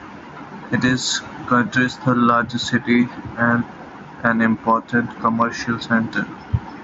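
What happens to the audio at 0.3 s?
Gain pumping runs through the whole clip, including 0.3 s. The input gain is likely set far too high, so a fast limiter clamps down on every loud sound. The gain swings by around 10 dB under speech, squashing the level.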